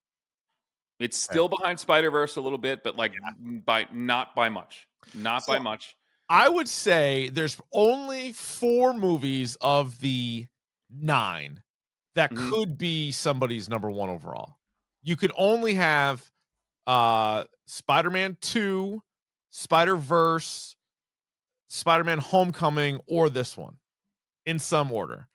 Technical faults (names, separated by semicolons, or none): resampler restarted on every block